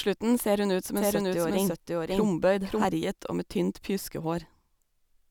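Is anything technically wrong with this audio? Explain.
Yes. A doubled audio track runs from 0.97 to 2.85 s: a second full-band copy of the speech trails the original by about half a second at roughly equal level, likely from an edit or second capture path holding two copies out of step, with no room decay, starting and stopping abruptly.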